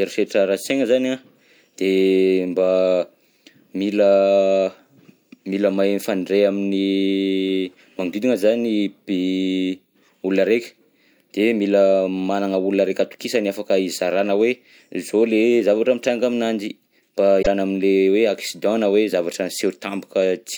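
Damaged data in a compressed stream at 17.39–17.47 s, after "zavatra mitranga aminanjy mba": the decoder loses frame sync, giving a brief glitch before "am'le hoe accident na".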